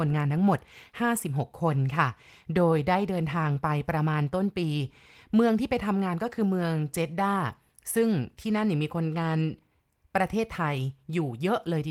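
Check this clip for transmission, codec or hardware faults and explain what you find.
No faults found.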